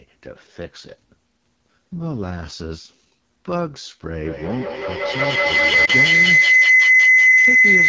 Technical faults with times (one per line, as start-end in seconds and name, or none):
0.00-7.89 AMR wideband (HD Voice) codec
4.25-7.88 feedback howl
5.86-5.91 lost AMR speech frames